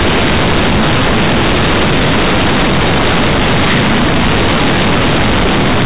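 Throughout, the speech is harsh, loud and buzzy, with heavy noise in pauses: companded audio read as linear, A-law bytes played as plain 8-bit samples without expansion.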